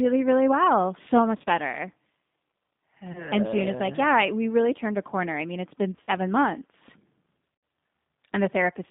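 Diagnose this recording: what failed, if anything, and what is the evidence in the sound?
Throughout, the speech sounds slightly rough and synthetic, confined to a narrow telephone band of roughly 150 Hz to 3.7 kHz with nothing above. The damage is plainly audible. This is a codec-stage fault: G.729 coding at 8 kbit/s, likely the G.729A variant. It rebuilds each 10 ms frame from a vocal tract filter, a pitch predictor and a few fixed pulses, so the fine waveform detail is lost and replaced by a coarse model.

Four short stretches are stretched into a buzzy tone or coloured noise, then fade and recover sluggishly: 1.38 to 1.46 s, 3.12 to 3.33 s, 5.96 to 6.14 s, and 7.55 to 7.63 s. This is VoIP packet loss concealed by the speech codec, a network-stage failure. The sound points to about 50 ms missing in short runs across 80 ms, then 30 ms, about 70 ms across 120 ms, and a solid 80 ms gap. 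The decoder stretched its last pitch and filter with falling gain, and because each frame builds on the one before, the distortion persists briefly after packets return.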